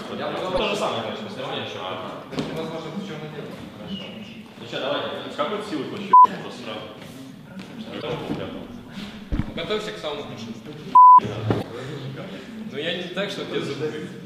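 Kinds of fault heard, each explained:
Damaged data in a compressed stream: bad bytes throw the decoder off sync, so you get 56 ms blips at 0.54, 3.49, 7.98 and 11.59 s.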